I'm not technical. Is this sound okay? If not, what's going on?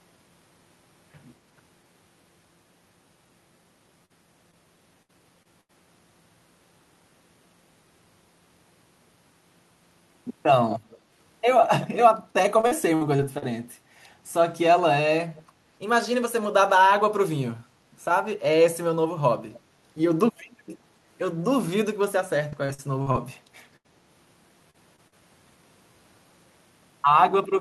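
No. The speech has several problems, most typical of a call over a shaky connection.

Repeated packet loss (robotic sound) happens three times: 4.05 to 5.71 s, 12.61 to 13.44 s, and 22.50 to 23.16 s. Each stretch has five small dropouts, the longest under a tenth of a second. The receiving end patches every hole by stretching the last sound it got. Packed that close together, the patches make the speech choppy and robotic, with bits missing.

An echo leak appears as brief, faint repeats at 10.90 to 10.98 s, 15.36 to 15.43 s and 19.53 to 19.60 s. Each is a quiet copy of the speech about a quarter of a second late. The one at 19.5 s is a little louder. The likely cause is that one side is on a loudspeaker. Its echo cancelling missed some of what its microphone heard, and that leftover was sent back.

A burst of packet loss hits at 23.76 to 23.86 s. About 80 ms of speech never arrived. The receiver held the last sound and let it fade, so you hear a short buzz or hiss. 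Then the speech jumps ahead, and the piece in between is gone.

Short concealed packet loss follows three times: 24.70 to 24.76 s, 24.96 to 25.00 s, and 25.08 to 25.14 s. Each lost only 20 to 40 ms. The gap was filled by continuing the last sound and blending back in, so it comes across as a tiny smear or wobble. A quick consonant may drop out.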